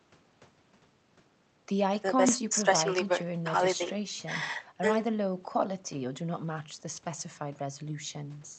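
Nothing in this speech recording stands out as a technical fault. It has come through a WebRTC call path, and the top end stops at about 8 kHz, which fits an Opus call codec working at a modest bitrate.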